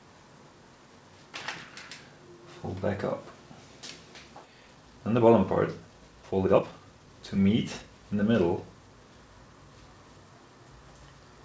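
The sound, carried over a WebRTC call path whose G.722 coding leaves nothing above 8 kHz, has a skip ahead at 4.44 to 4.46 s. About a second of audio is simply gone and the two sides are butted together with no silence or fill. That is what separates it from a dropout, which would leave an audible hole rather than a sudden jump forward. It points to a late or overflowing jitter buffer discarding a backlog of roughly one second.

Right after that come two stretches of jitter buffer speed-up, from 4.54 to 5.34 s at 113 percent and from 5.80 to 7.84 s at 117 percent. Together they remove roughly half a second by cutting out short pitch-period pieces again and again. The sound runs hurried, but its pitch stays the same. That is the difference from a resampling or clock error, where faster playback would also raise the pitch.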